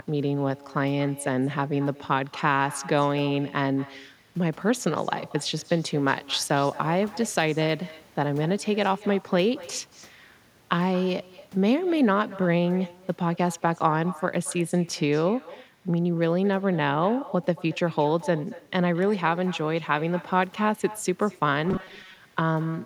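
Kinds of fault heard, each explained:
Echo with no canceller, throughout: the speech returns about 18 dB quieter, roughly a fifth of a second later, as a thin shadow. A far-end loudspeaker feeds back into its microphone and nothing strips that copy out before it travels back.
Robotic sound from repeated short buffers, 21.69 to 22.20 s: the speech collapses into a rigid metallic buzz near 188 Hz. The likely cause is late-arriving audio patched by looping a slice of about 5 ms, with roughly half the real signal replaced by repeats.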